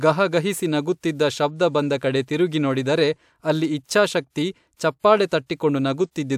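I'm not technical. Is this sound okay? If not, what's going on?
Yes, the speech recording has no audible technical faults.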